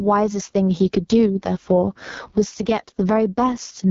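It's a short speech clip with two problems running the whole way through. There's gain pumping: the level ducks hard, by something like 20 dB, under each loud bit, so everything sounds squashed. The likely cause is input gain set far too high with a fast limiter clamping down. On top of that it's gone through the AMR wideband (HD Voice) codec, and the heavy rough, raspy texture points to its lowest rate, around 6.6 kbit/s. Nothing is left above 7 kHz.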